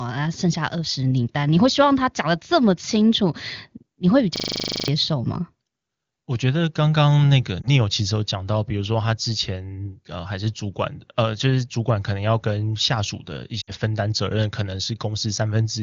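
From 4.36 to 4.88 s a system hang loop takes over: the machine froze while the audio hardware kept replaying the same 40 ms of ring buffer, 13 times at 25 Hz. The result is a rigid buzz, not a dropout, and about half a second of the real sound never arrives.

At 7.61 to 7.68 s a single lost AMR speech frame of 20 ms briefly warbles the sound. A longer run of three lost frames, 60 ms in all, follows at 13.61 to 13.72 s. In both cases the decoder rebuilt the missing audio from the last good pitch and vocal tract settings at falling gain. Unlike the hang loop, this does not repeat exactly. It smears and fades, then the sound returns weak or rough for a moment. This all sits inside clean AMR-WB audio whose clarity points to one of the codec's higher rates.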